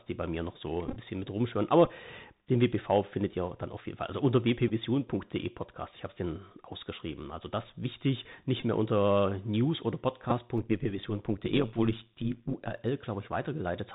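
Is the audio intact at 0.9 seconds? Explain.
No. From 0.89 to 0.97 s there is a Bluetooth headset packet repeat: voice packets were lost and the decoder replayed the previous packet's bits. About 45 ms went missing, scattered across 75 ms, which fits roughly a dozen lost packets. The longest run is about 10 ms, heard as brief buzzy roughness from repeats at 3.75 ms intervals.

That moment also carries the Bluetooth CVSD headset codec, plainly audible: nothing above 4 kHz passes, sibilants are scratchy, and a granular hiss sits underneath. The sound points to 64 kbps CVSD, whose one-bit adaptive steps cannot follow loud high-frequency content.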